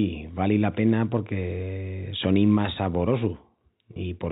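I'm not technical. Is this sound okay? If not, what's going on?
No. At 3.94 to 3.96 s there is a brief packet loss with pitch repetition: about 20 ms of the speech never arrived, so the receiver repeated its last pitch cycle to fill the gap, producing a short held, slightly buzzy blip on ordinary telephone-quality audio.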